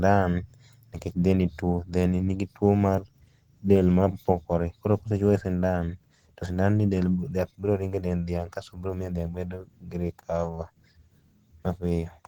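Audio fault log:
0.87 s to the end: adaptive stream at a lower bitrate. The speech suddenly loses quality, with no gap or dropout at the switch. The stream has moved to a lighter version, probably because the connection slowed. The sound fits a drop from Opus at 64 kbit/s to 16 kbit/s. With far fewer bits, the encoder codes detail more coarsely, so codec artefacts rise. The lower quality lasts until the clip ends. There is no content above 20.2 kHz.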